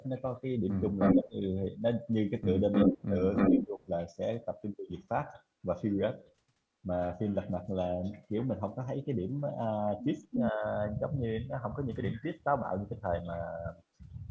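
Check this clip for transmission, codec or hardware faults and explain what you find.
Two related call faults recur in the first four seconds and again near 10.3 s: an echo leak and speech suppressed in double talk. Both point to a far end using a loudspeaker whose echo canceller is struggling.

The echo leak appears at 0.99–1.2 s, 2.72–3.03 s, 3.35–3.65 s and 10.31–10.49 s. A copy of the talker comes back about 309 ms late in the first three and 340 ms late in the last. The cause is likely the remote loudspeaker's output reaching its microphone without being fully cancelled. The returned copy is well below the speech at first, closer in level at 3.4 s, and roughly as loud as the speech at 10.3 s. Its fixed, clearly separate delay distinguishes it from room reverberation, which smears sound continuously rather than repeating it.

Speech suppressed in double talk follows each leak: 1.15–1.36 s, 2.86–3.16 s, 3.5–3.88 s and 10.52–10.64 s. 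The talker's level dips by roughly 10 to 20 dB, deepest near 1.2 s, for one to three tenths of a second. While both signals overlap, the canceller cannot separate the talker from the echo, so it turns everything down. These are partial dips tied to the echo bursts, unlike packet-loss dropouts, which leave abrupt silences or glitches at unrelated moments. The lack of content above 8 kHz comes from normal call microphone processing.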